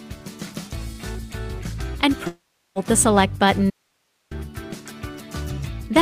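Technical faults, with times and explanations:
2.27–2.78 s, long network dropout. About half a second of audio never arrives. The receiver fills the hole by stretching the last sound, which turns into a fading buzz or hiss. For the final 340 ms or so there is only near-silence. The sound then resumes further along, with the lost half second simply gone. This is likely a run of packets lost or delayed on the network, long enough to outlast any concealment.
3.70–4.31 s, audio dropout to a faint residue. The signal cuts out abruptly for about 0.61 s and returns just as suddenly. The gap is not empty. A low hiss remains, roughly 45 dB below the normal level. So the path after the break stayed live while the source was missing. The hard edges set it apart from a pause or a fade. A likely cause is a brief loss of the input feed ahead of a still-running stage.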